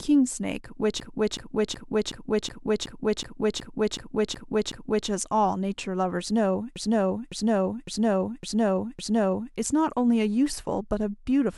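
From 1.0 to 5.09 s, the speech stutters. Repeated frames make the decoder replay the same 371.5 ms block eleven extra times, adding 4.09 s. From 6.76 to 9.55 s, a 557.3 ms block plays five extra times, adding 2.79 s.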